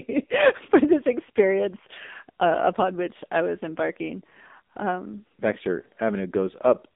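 Across the whole clip the speech carries the sound of the AMR narrowband mobile codec. The line band runs from about 200 Hz to 3.7 kHz, with nothing above 3.8 kHz, so the voice sounds thin and telephone-like. The codec rebuilds speech from a vocal tract model and a small set of pulses per short frame, and the codec damage is heavy: the voice comes out buzzy and synthetic, which points to a low mode around 6.7 kbps.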